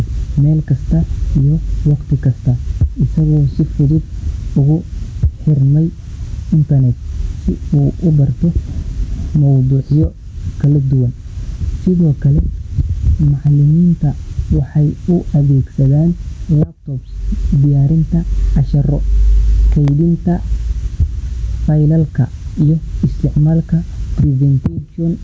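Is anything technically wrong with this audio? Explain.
Yes, there are two faults in this speech recording.

Gain pumping runs through the whole clip. The level is pulled down on loud sounds, with a swing of roughly 15 dB. The likely cause is microphone gain set far too high, with a fast limiter or compressor clamping it on every peak. Loud and quiet passages end up squeezed close together. This differs from a noise gate, which would cut the pauses to near silence.

A block of digital silence occurs at 19.88 s. For 0.73 ms the signal drops straight to zero and comes back with no fade, which fits a block of about 32 samples that was never filled. Each hard edge produces a step, so the gap is heard as a tick or dip rather than an audible hole. That sets it apart from a dropout with fades or a packet-loss gap, both of which last long enough to hear as missing sound. The call's microphone processing is also present, and nothing reaches above 8 kHz.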